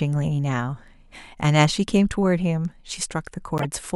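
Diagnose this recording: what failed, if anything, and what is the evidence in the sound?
The codec stage failed near the end. A corrupt frame decoded from 3.58 to 3.65 s gives a brief chirp, squeak or burst peaking around -10 dBFS. Its 70 ms span points to roughly two damaged frames, whose flipped bits misplaced energy across the spectrum.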